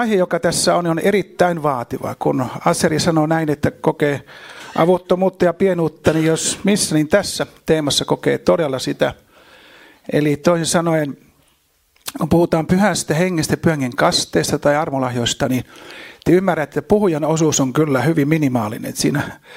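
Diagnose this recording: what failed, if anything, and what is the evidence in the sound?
Brief crackles at 3.88 s and 6.08 s are hard clipping: peaks overran the converter's range by about 1 dB and about 0 dB, so their tops were cut flat.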